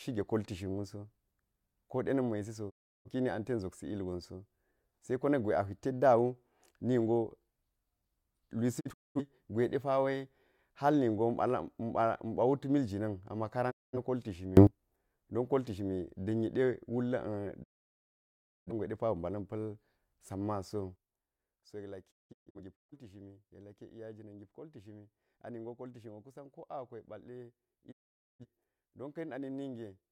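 At 2.69 s the speech fades out over 20 ms and falls silent until 3.09 s. This is a digital broadcast dropout. The receiver lost valid frames and muted. More follow at 8.79 to 9.21 s as scattered short holes, and at 13.70 to 13.97 s.

At 14.57 s a sudden gain jump lifts speech and noise together by about 24 dB for a tenth of a second. It likely comes from digital gain switching without a ramp.

The longest dropout runs from 17.62 to 18.72 s, about a second. At 20.96 s the level falls by about 12 dB and stays low to the end. Dropouts return at 22.10 to 22.94 s in broken holes, then at 27.91 to 28.45 s. The missing speech never comes back.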